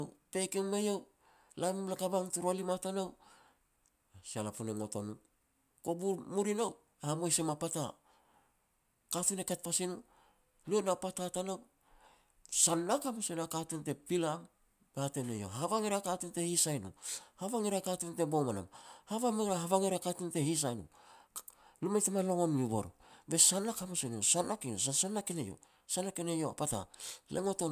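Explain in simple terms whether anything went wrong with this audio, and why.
Nothing went wrong here: the speech signal stays steady and intact throughout, with no technical faults to be heard anywhere in the recording.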